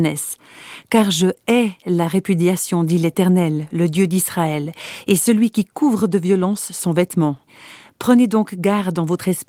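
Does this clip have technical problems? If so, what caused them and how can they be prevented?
No, nothing here needs fixing or preventing; the speech sits on a working Opus voice compression path whose full-band hybrid coding leaves only light traces, consistent with a moderate voice bitrate.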